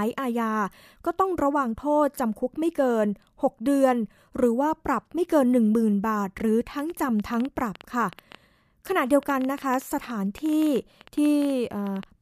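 From 6.79 s to 12.04 s, a train of clicks runs over the speech, about 7.4 per second at uneven spacing, roughly forty similar pops, most likely from interference.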